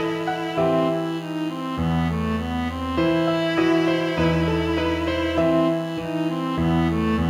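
DECT cordless phone buzz runs throughout: a nearby handset's 100 Hz radio bursts get rectified, giving a thin, harmonic-rich buzz roughly 25 dB below the sound.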